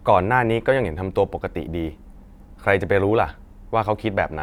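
No technical faults are audible.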